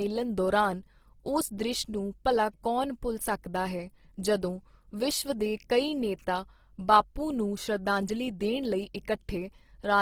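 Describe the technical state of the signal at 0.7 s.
Opus compression is present at 0.7 s, as across the whole clip. Band energies are kept, but starved bands are refilled with folded or noise content, likely from its music mode at around 16 kbps. The speech turns grainy and rough, yet still reaches about 20.3 kHz.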